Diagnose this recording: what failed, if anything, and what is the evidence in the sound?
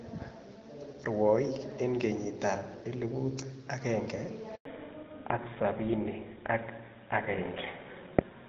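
The failure is at the network stage: a handover gap. At 4.55 s the speech collapses to silence within a few tens of milliseconds. It stays silent until 4.65 s, a hole of 100 ms. No speech frames arrived while the call moved from one network to the other. The receiver had nothing to decode, so whatever was said in that tenth of a second is simply gone.

The second fault follows the handover: fallback to narrowband. From 4.65 s to the end, nothing above 4 kHz is left. The sound turns duller and rougher at once. Before the switch, the wideband path carries clear speech with only light coding damage, which fits HD Voice at about 12.65 kbit/s. After it, the spectrum points to an older narrowband codec such as GSM full rate. This is the call's codec stage being renegotiated on the new link.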